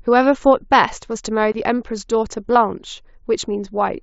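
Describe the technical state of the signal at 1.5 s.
At 1.52 s the speech drops into a block of digital silence lasting about 23 ms, until 1.54 s. The audio there drops to silence. The length fits a 1024-sample buffer that was not filled in time. The signal cuts to nothing and back with no fade. It sounds like a brief hole, under the band-limited tone of the mSBC Bluetooth link.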